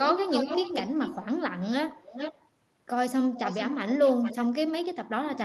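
A delayed copy of the speech, trailing it by 0.42 to 0.44 s, is heard from 0.02 to 1.25 s and again at 1.9 to 2.48, 3.34 to 3.71 and 4.04 to 4.36 s, fairly strong at first and fainter later. This echo leak likely comes from a loudspeaker whose echo canceller passed some of its pickup back.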